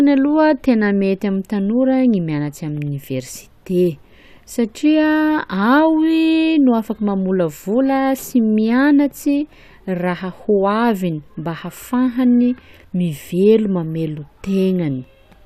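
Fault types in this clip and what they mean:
No technical faults can be heard anywhere in this speech recording; the signal stays steady and continuous throughout.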